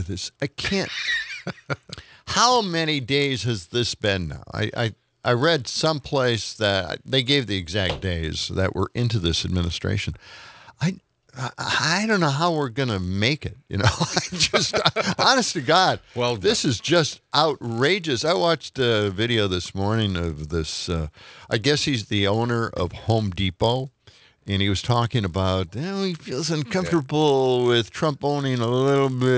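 Throughout the clip the resampler restarts on every block. Each 20 ms block is converted on its own, which fits a 44.1 kHz to 16 kHz conversion, so every block edge carries a small error. The result is a steady 50 Hz buzz riding on the signal.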